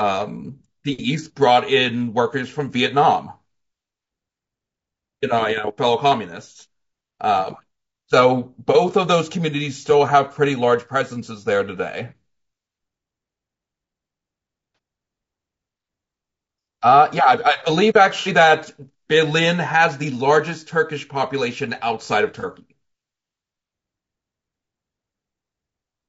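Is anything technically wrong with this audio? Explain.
Yes, there are two problems here, one that runs through the whole clip and one that hits in three short spots.

Throughout, the speech has a rough, grainy texture, with a hiss sitting between the harmonics and a top band that sounds thin and a bit synthetic. That's plainly audible damage, and it's likely from low-delay AAC compression of the AAC-ELD type used for video calls, at a rate that sounds like around 32 kbps. Its short frames can't separate the pitch harmonics cleanly, and at a modest bitrate the encoder runs out of bits, so noise fills the gaps and the highs get approximated rather than coded.

Then there's AAC frame loss with concealment at 14.75 to 14.78 s, 18.20 to 18.28 s and 22.40 to 22.45 s. The first and third are about 30 ms each, and the middle one is about 60 ms. When frames go missing, the decoder patches the gap from the last good spectrum, with jumbled phase or smoothed-over energy. 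That's why each spot comes through as a brief smeared, noisy or phasey blur instead of a clean gap, and the 18.2 s one lasts longer.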